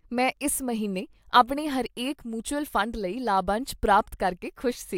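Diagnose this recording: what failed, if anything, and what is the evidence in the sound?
Word clock ticks run from 0.37 s to 4.56 s: about seven sharp, uneven ticks through the speech, roughly every 0.7 s. The receiving converter's clock wasn't locked to the sender's digital link, so one sample slips at each crossing, which fits a mismatch of around 30 ppm.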